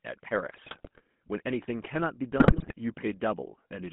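GSM full-rate codec damage runs through the whole of this speech clip, audible as a buzzy, gravelly roughness, with the band held to roughly 150 Hz to 3.4 kHz. The coder rebuilds the voice from a vocal-tract filter excited by a sparse, regularly spaced pulse train, which fits the 13 kbps full-rate scheme, so fine detail in the excitation is lost and the voice takes on that coarse, rasping quality. GSM bit errors then break in from 0.51 to 1.01 s and again from 2.38 to 2.73 s, where the voice turns into squawks, pops and gargling. Corrupted bits reaching the decoder scramble the filter, pitch and gain values of individual frames, bending the spectrum and throwing the level around frame by frame. The second burst comes from a denser error rate, around 5 percent of bits against about 3 percent in the first.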